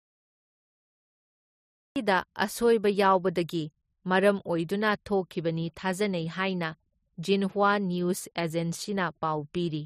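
A cut-off start runs from 0.0 to 1.96 s. The opening stretch is pure digital silence, and at 1.96 s the speech appears abruptly, already in progress, with no natural onset or fade-in. The capture or stream only began delivering audio partway through, so whatever came before that point was never recorded. The first syllable heard is truncated rather than beginning cleanly, giving a hard, chopped entry.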